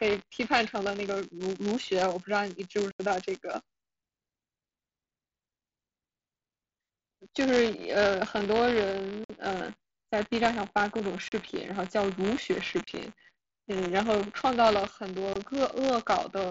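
A steady robotic buzz at about 172 Hz rides on the speech for its whole length. This is buffer tearing: the writer and reader of a ring buffer have slipped, so each period carries a small slice, around 2%, of audio from roughly 20 ms earlier, with hard joins that repeat at a rate fitting a 256-sample buffer. Separately, abrupt holes cut the speech at 2.91–3.00 s (82.5 ms), 9.24–9.30 s (52.5 ms), 11.28–11.32 s (37.5 ms), 12.84–12.88 s (30 ms) and 15.33–15.36 s (22.5 ms). These are unconcealed Bluetooth headset packet loss: runs of lost headset voice packets replaced by silence or an idle pattern rather than patched over. They are carried over an mSBC wideband link, whose light graininess is audible on loud sounds.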